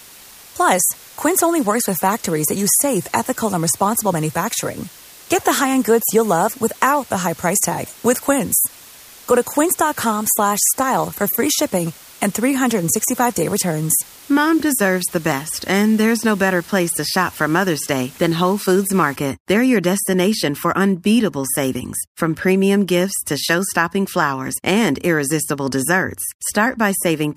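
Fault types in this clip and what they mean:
Low bit depth with dither: The speech is held at very few amplitude levels. Small random noise was mixed in before each sample was rounded. That turns the rounding error into a steady hiss instead of grainy distortion. Here the hiss runs from the start to 19.16 s, then stops. It sits roughly 25 dB below the speech, a level that fits a signal kept to 7 bits. The hiss stays even, with no crunch on quiet passages.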